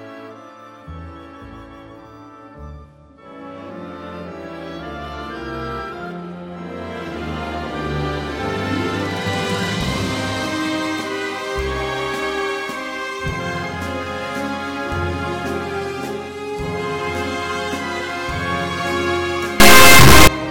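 From 19.60 to 20.27 s the sound becomes a harsh, extremely loud square-wave buzz, the signature of integer read as float: 32-bit integer samples are taken as 32-bit float values, so most land near zero or far beyond full scale and the output slams between silence and the clipping rail. Ordinary clipping keeps the underlying sound under flattened peaks. Here nothing of the original survives, only the rail-to-rail buzz and near-silent gaps during quiet stretches.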